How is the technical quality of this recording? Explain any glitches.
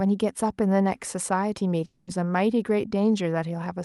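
The recording has one clear glitch, a long network dropout, on a call-style chain whose spectrum tops out around 12 kHz, which fits Opus at about 64 kbps.

From 1.85 s to 2.09 s the sound stops progressing and is replaced by roughly 220 ms of synthetic continuation: the last sound is stretched into a buzzy, fading hiss, and the real audio resumes afterward with that stretch missing. This is likely packet loss that the receiver concealed by extrapolation rather than leaving silence. On a spectrogram the harmonics smear into flat, decaying bands; the waveform shows a repetitive, shrinking envelope, then a jump back to normal signal.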